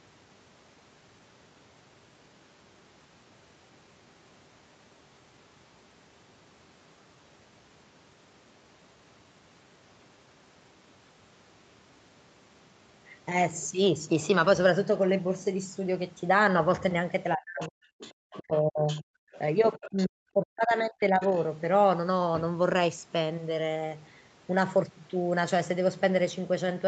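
Speech suppressed in double talk starts at 17.35 s and runs to 17.92 s. The talker's level drops by as much as about 40 dB in pieces, totalling roughly half a second. Both ends were talking at once, and the echo canceller likely could not tell the local talker from the loudspeaker echo, so it turned everything down. Inside that dip, from 17.6 to 17.68 s, a brief scrap of the other side's voice leaks through.

The other side's voice leaks through again from 17.99 to 19.38 s, a longer stretch about 20 dB below the talker, likely because far-end sound picked up by the microphone was not fully cancelled. Over that stretch the talker is suppressed once more from 18.38 to 19.07 s, for about a third of a second in total.

The longest suppression runs from 19.76 to 21.22 s, cutting the talker by up to about 40 dB across roughly a second and a half. Leakage appears from 19.82 to 20.07 s, about 20 dB down, and from 21.22 to 21.4 s, fainter at about 30 dB down.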